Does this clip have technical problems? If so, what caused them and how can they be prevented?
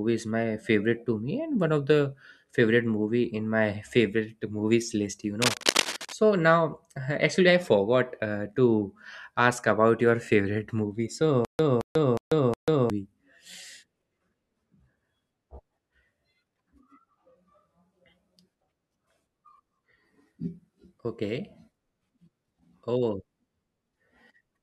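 Yes. From 5.41 to 6.13 s there's cable scratch noise, a rough rustling about as loud as the speech, likely a worn lead or connector being moved. Check or replace cables and connectors, and keep them still while recording.

From 11.45 to 12.90 s there's a stutter with silent gaps. A 0.22 s fragment repeats four times, each followed by 0.14 s of dead silence, likely a playback or stream stall. More buffering and a steadier connection or drive should prevent it.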